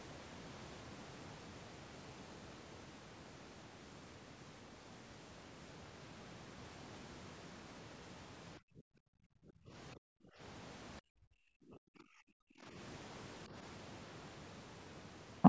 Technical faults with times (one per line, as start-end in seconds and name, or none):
8.58-10.42 speech suppressed in double talk
11.00-12.76 speech suppressed in double talk
13.47-13.54 speech suppressed in double talk